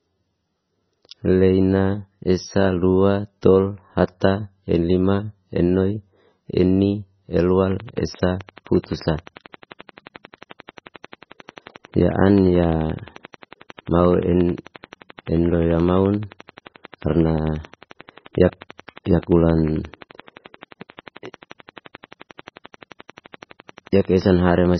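From the start, the speech is heavily watery and swirly with nothing above 6 kHz, likely from MP3 compression at a very low bitrate around 16 kbps. A spectrogram shows a hard ceiling and flickering gaps.

From 7.72 s to 24.75 s, a regular train of clicks ticks at 11.4 per second, about two hundred in all, peaking about 5 dB above the speech. This is likely from interference or a faulty connection or supply. It appears as evenly spaced vertical stripes and waveform spikes.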